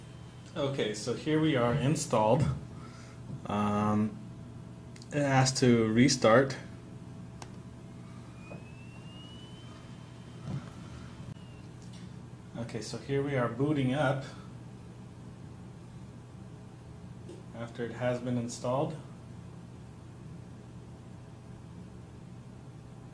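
No technical faults are audible.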